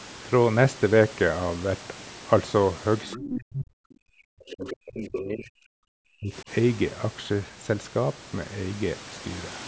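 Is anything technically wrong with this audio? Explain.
Yes. Two related faults show up in this speech clip, both in the middle section.

Other side's voice leaking through, from 3.1 to 3.29 s and again from 4.5 to 4.76 s. The likely cause is that the talker's device played the far end over its loudspeaker and the echo canceller failed to subtract all of it from the microphone signal. The leftover comes through as brief scraps of a second voice, sitting about 15 dB below the main speech.

Speech suppressed in double talk, from 3.16 to 6.49 s. While both ends were talking at once, the canceller likely couldn't distinguish its own talker from the loudspeaker echo, so it pulled the whole signal down. For roughly three seconds the main voice sinks, falling at its deepest by around 40 dB, until the overlap ends.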